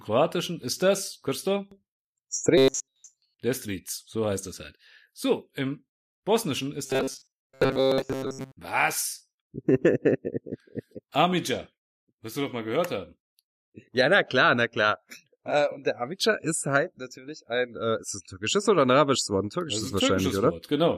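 From 2.58 to 3.39 s, and again from 6.86 to 8.57 s, the speech turns into robotic sound from repeated short buffers. It becomes a rigid, metallic buzz at 133 Hz that still loosely tracks the speech. The likely cause is audio arriving too seldom. A fragment of about 7.5 ms is looped to fill the gaps, replacing most of the real signal. That loop rate sets the fixed pitch.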